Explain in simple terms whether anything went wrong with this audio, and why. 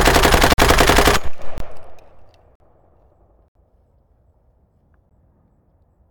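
The sound drops out five times, each a block of digital silence. The audio cuts to total silence at 0.53, 1.58, 2.55, 3.48 and 5.09 seconds, for about 14 to 70 milliseconds. Each cut starts and stops abruptly, so you hear a click or a short hole. The program likely fell behind in preparing audio, leaving gaps unfilled.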